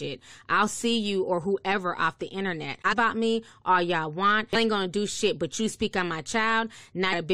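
Brief glitches cut through the speech at 2.91 to 2.93 s, 4.54 s and 7.12 s, each lasting about 20 ms or less. They come from damaged data in the compressed stream: corrupted bytes made the decoder misread those frames and lose sync until it found the next valid header.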